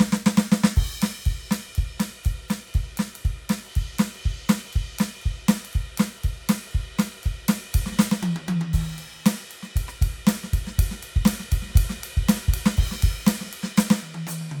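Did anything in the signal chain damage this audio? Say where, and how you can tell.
No, nothing damaged this music.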